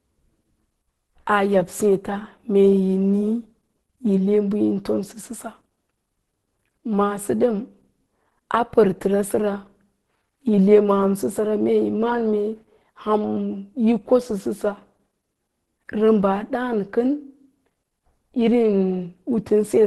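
Throughout the speech, nothing is heard above 12.1 kHz, and the voice sounds muffled and hoarse. This is likely Opus compression in its hybrid speech mode. The encoder narrows the band and thins the detail, which fits a bitrate near 16 kbps.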